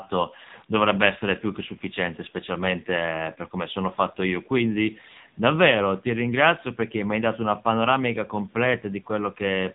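From start to finish the speech sounds boxed-in and buzzy, with a synthetic, reedy edge and nothing above about 3.8 kHz. That is the AMR narrowband mobile codec, heavily damaged. The voice is sampled at 8 kHz and rebuilt from a vocal-tract model excited by a few pulses in each short subframe. So few bits reach that model that the voice sounds artificial, which fits a low rate near 6.7 kbps.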